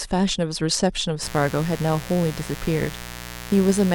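At 1.22 s a mains buzz kicks in and runs to the end: sharp 60 Hz switching spikes leak in, giving a steady raspy buzz maybe 15 dB under the speech.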